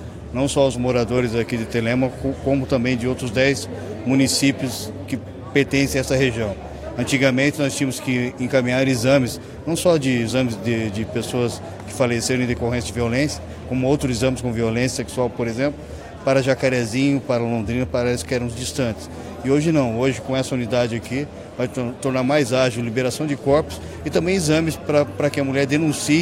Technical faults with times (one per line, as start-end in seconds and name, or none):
none